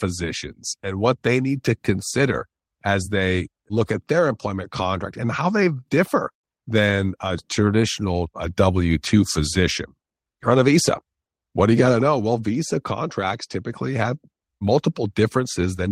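Nothing in this recording of speech stands out as a technical fault at any point, so there's no moment worth flagging.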